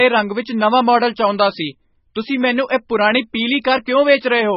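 A speech clip with heavy MP3 compression damage throughout. Nothing sounds above 5.6 kHz, so the treble is dull. Weak frequency lines switch on and off between frames, giving a watery, swirly texture. This likely comes from a very low bitrate, around 16 kbps.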